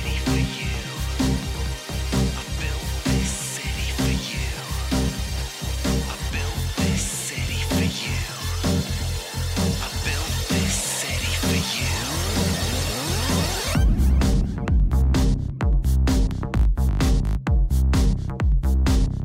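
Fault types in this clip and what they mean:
There are no fault types in this clip to list or explain.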